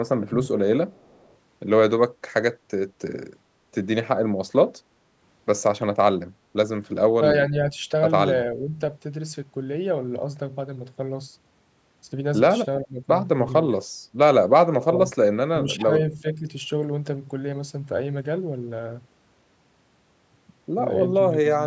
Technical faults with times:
0.91-1.36 echo leak
7.18-7.82 speech suppressed in double talk
8.55-8.80 speech suppressed in double talk
12.84-13.08 speech suppressed in double talk
14.80-14.85 echo leak
14.86-15.16 speech suppressed in double talk
15.53-16.48 speech suppressed in double talk
21.30-21.65 speech suppressed in double talk

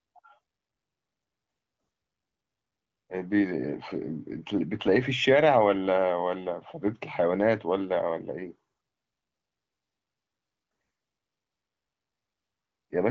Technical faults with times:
none

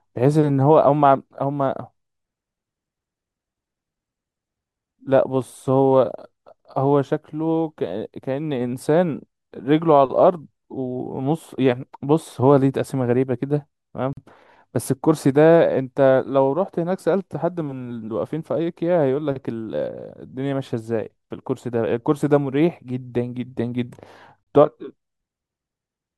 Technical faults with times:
14.13-14.17 gap at a join of encoded pieces
24.43-24.47 gap at a join of encoded pieces

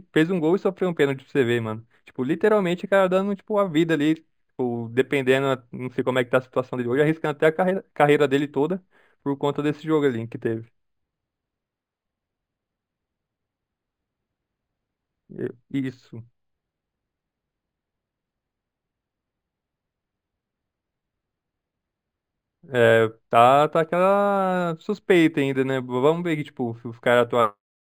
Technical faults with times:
0.00-27.99 imaging from linear upsampling

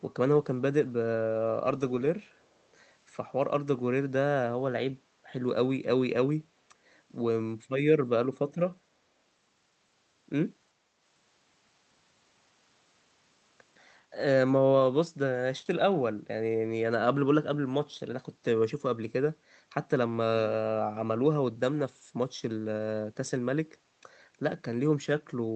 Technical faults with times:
2.43-2.47 echo leak

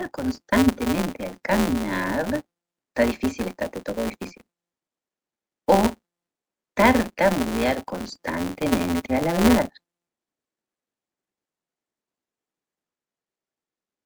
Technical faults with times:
0.00-14.06 filter restarted on every block

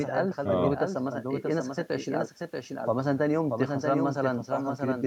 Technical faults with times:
0.00-5.07 doubled audio track

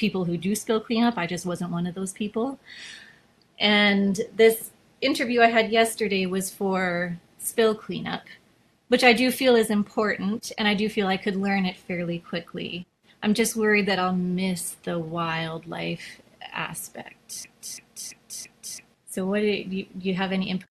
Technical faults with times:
17.44-18.94 broken-record loop

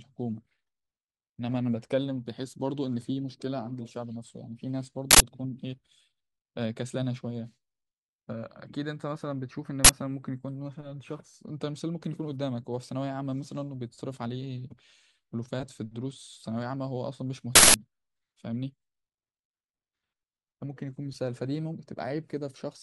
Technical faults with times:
5.11-5.20 uninitialised buffer
9.85-9.89 uninitialised buffer
17.55-17.74 uninitialised buffer

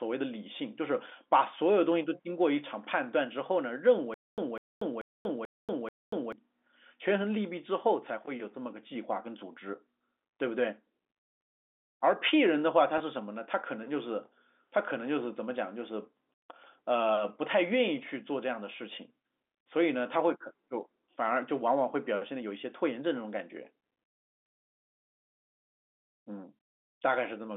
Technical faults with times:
4.14-6.32 stutter with silent gaps
12.98-13.00 packet loss with pitch repetition

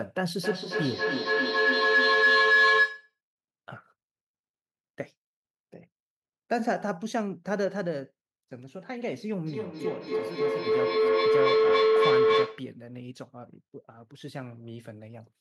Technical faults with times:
0.36-3.18 feedback howl
9.46-12.75 feedback howl

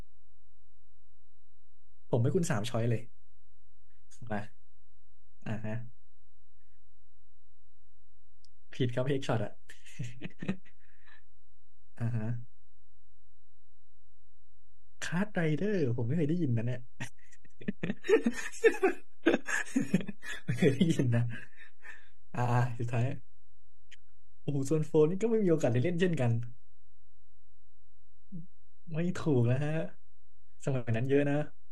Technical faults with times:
0.00-31.71 DC offset
17.89-21.89 adaptive stream at a lower bitrate

